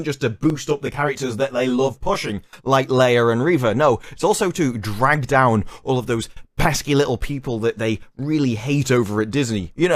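From 0.50 s to 2.29 s there is channel delay (comb filtering). One channel trails the other by around 20 ms, and when the two are combined to mono, content common to both cancels at regularly spaced frequencies. The lowest notch sits near 30 Hz, with further notches repeating up the spectrum at close, even intervals. The result is a rough, slightly doubled sound that persists for this stretch.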